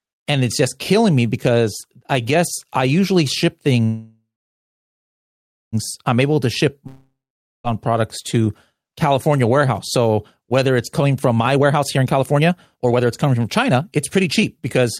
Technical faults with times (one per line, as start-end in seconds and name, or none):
3.85-5.75 call audio freeze
6.87-7.67 long network dropout
11.28-14.87 jitter buffer speed-up